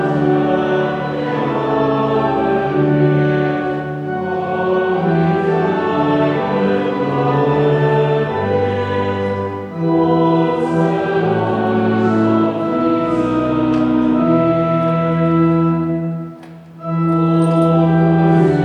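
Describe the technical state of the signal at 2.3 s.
At 2.3 s the signal is intact, with no audible fault of any kind at that moment.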